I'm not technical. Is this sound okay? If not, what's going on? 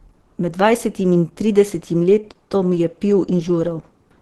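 No, not quite. All the way through, this speech has a muffled, hoarse, rough edge, as if the voice were squeezed through a narrow pipe. The top end is simply missing, nothing above roughly 12.3 kHz, so the crisp airy detail is gone. That's most likely Opus compression, squeezed hard enough that it switched into a speech-oriented mode that trades clarity for a small file. The damage is plainly audible from start to finish.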